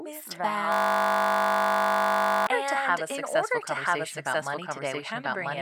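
A doubled audio track runs throughout. A full-band copy trails about a second behind at about equal level, likely from a second, slower capture path. From 0.72 to 2.47 s a system hang loop takes over. One 20 ms fragment repeats exactly, giving a steady 50 Hz buzz while the system is frozen.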